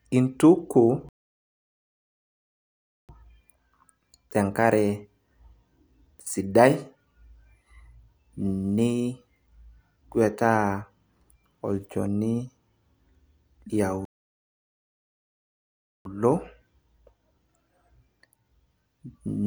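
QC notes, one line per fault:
1.09–3.09 s and 14.05–16.05 s, playback stall: speech halts mid-flow for a full 2 s of silence, far longer than a dropout gap, likely from the player running out of data.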